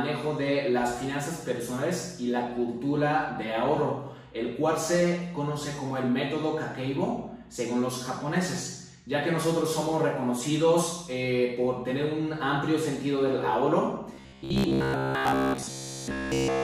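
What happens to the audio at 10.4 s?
Nothing goes wrong at 10.4 s: the audio plays through that moment intact, with no dropout, click or distortion.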